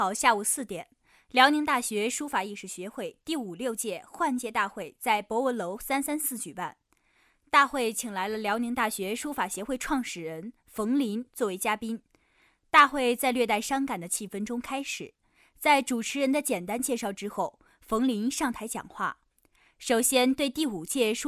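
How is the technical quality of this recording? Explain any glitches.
Listening closely, nothing in the recording stood out as a technical glitch.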